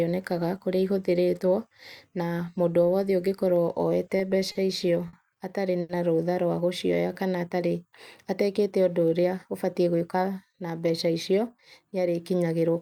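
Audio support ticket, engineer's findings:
Repeated stalls (stutter), 4.05 to 5.15 s. Jitter buffer ran dry four times as packets arrived late; receiver held the last sound through each gap, 100 ms filled in all, longest 50 ms. Nothing lost, but the speech drags and stutters.

Short stall from a late packet, 5.81 to 5.91 s. One packet missed its slot and the buffer emptied; receiver stretched the preceding sound 80 ms, then resumed in place. Latency up 80 ms. Audible as a held sound with slight buzz or dip.

Jitter buffer slow-down, 6.96 to 7.24 s. Buffer low or target delay raised, refilling by repeating single pitch periods; 45 ms inserted, playback at 87% speed. Speech slowed, pitch unchanged, sounds drawn out, possible faint warble.

Jitter buffer speed-up, 9.23 to 10.22 s. Excess buffered audio; receiver trimmed short pitch-period slices, about a tenth of a second total. Playback at 108% speed, same pitch, speech sounds hurried.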